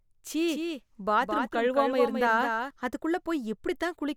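From 0.49 s to 2.71 s the speech carries a doubled audio track. A second full-band copy trails the original by about a fifth of a second, roughly 5 dB quieter. It has no decay or room colour. It likely comes from a slower capture path, and it starts and stops abruptly.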